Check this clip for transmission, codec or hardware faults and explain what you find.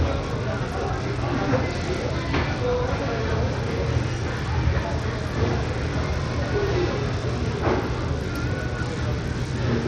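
One codec fault runs through the whole clip.

Throughout, the audio shows Bluetooth SBC compression, likely from a starved bit pool, which fits a low rate near 80 kbps. The top sub-bands get no bits, so nothing survives above 12.2 kHz, and coarse quantisation leaves plainly audible grit and aliasing on the sound.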